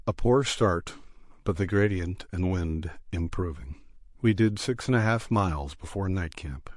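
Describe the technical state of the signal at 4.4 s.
Just before 4.4 s, from 4.36 to 4.38 s, a short hiss rises about 15 dB ahead of an attack, which lands soft. This is pre-echo: quantisation noise spread across a 48 ms transform block fills the quiet lead-in, with no short blocks engaged. The speech here also sounds watery with smeared edges, likely from MP3 compression at a bitrate that fits about 48 kbps, with weak frequency lines dropping in and out.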